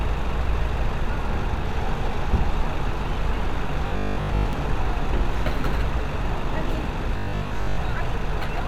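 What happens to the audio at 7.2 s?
From 7.17 s to 7.77 s the sound turns into a rigid, metallic buzz at 50 Hz. This is robotic sound from repeated short buffers. The likely cause is audio arriving too seldom. The playback fills each gap by looping the last short slice, and most of the real audio in that span is skipped. The loop repeats every 20 ms, which sets the buzz at 50 Hz. The buzz still loosely tracks the shape of the original sound.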